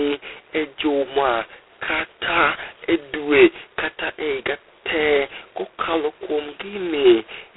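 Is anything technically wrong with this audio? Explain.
Yes. Throughout the speech there is heavy G.726 ADPCM coding damage, which fits the 16 kbit/s rate. Only two bits per sample code each prediction error, so a harsh, rasping hiss rides on the speech and tracks its level. The band runs from about 150 Hz to 3.4 kHz, with nothing above 3.9 kHz.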